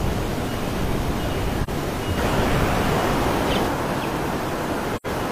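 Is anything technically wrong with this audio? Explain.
Yes. AAC frame loss with muting occurs at 1.63 to 1.69 s and again at 4.96 to 5.06 s. Missing frames were replaced with a silent spectrum, so the overlapping transform windows taper the sound down and back up around each gap. The first dropout lasts about 43 ms, which fits a single lost frame. The second is about 85 ms, consistent with two consecutive frames. Each is heard as a brief, soft-edged hole.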